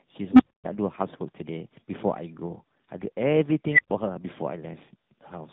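Tandem speech coding runs through the whole speech clip: the audio passed through two speech codecs in turn, likely GSM full rate then AMR-NB. It sounds rough, muffled and warbly, with nothing above 3.8 kHz.

From 0.32 to 0.65 s, an unstable filter's output grew without limit: a low tone around 300 Hz swells for about 74 ms, clips, then cuts to roughly a quarter-second silence.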